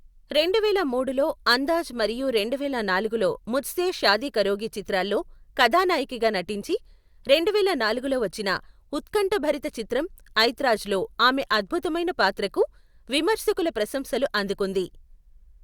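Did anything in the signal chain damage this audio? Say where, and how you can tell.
No, nothing in the signal chain damaged this audio.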